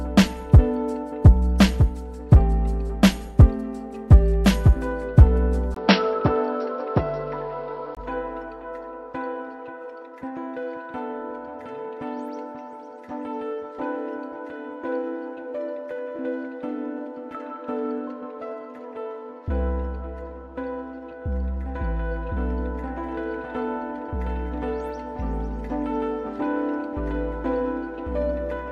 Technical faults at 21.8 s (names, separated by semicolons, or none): none